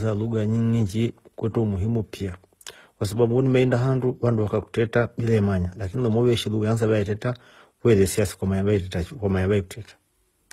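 Throughout, the speech carries two overlapping kinds of coding artefact and nothing above 15.6 kHz, likely transcoding between lossy codecs, unlike one codec's single signature.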